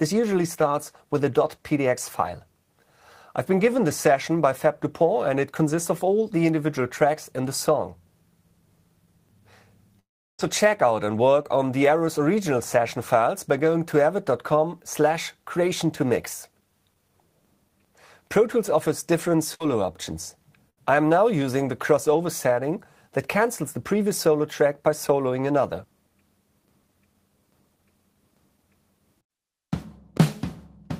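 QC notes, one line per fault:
9.99–10.41 s, long network dropout: Audio most likely stopped arriving over the network for about 0.4 s. The receiver briefly carried the last sound forward as a fading buzz or hiss, then left near-silence for most of the gap before audio resumed further on, with that stretch lost.
11.43–11.46 s, short concealed packet loss: About 20 ms of audio failed to reach the decoder in time. The receiver extended the preceding sound to cover the hole and blended it back into the real signal, leaving a brief smear or wobble rather than a clean gap.
19.54–19.62 s and 20.70–20.79 s, burst of packet loss: Each time, consecutive packets totalling about 60 ms were lost or arrived too late. The receiver continued the last sound while turning it down, producing a short held buzz or fading hiss, then jumped ahead with the missing portion gone.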